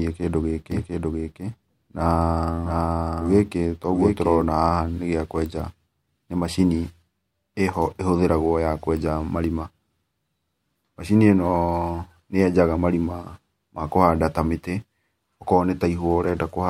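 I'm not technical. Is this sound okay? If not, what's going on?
No. A doubled audio track runs from 0.72 to 4.44 seconds. The same speech plays twice, with a quieter copy trailing about seven-tenths of a second behind. The second copy is most likely from the sound being recorded again through a slower path.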